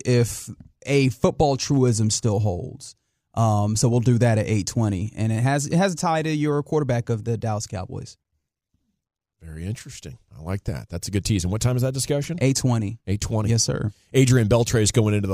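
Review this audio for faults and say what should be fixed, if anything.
No faults found in the speech recording; nothing needs fixing.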